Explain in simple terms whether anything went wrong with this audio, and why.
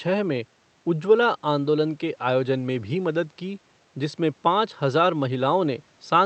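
Nothing went wrong here.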